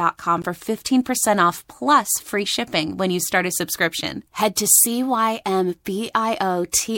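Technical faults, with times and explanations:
0.41–0.46 s, damaged data in a compressed stream: a brief burst of about 50 ms where the speech breaks up. Part of the encoded data at this point is corrupt, so the decoder cannot rebuild the frames correctly. It produces invalid output or nothing until it regains frame sync at the next valid header. The result is a short artefact unlike the surrounding speech, ending as soon as decoding resumes.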